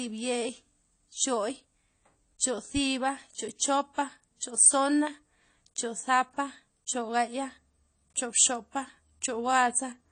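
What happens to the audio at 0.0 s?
From the very start and throughout, it's likely AAC compression: nothing above 10 kHz and audibly smeared, fizzy speech, which fits a low bitrate around 32 kbps.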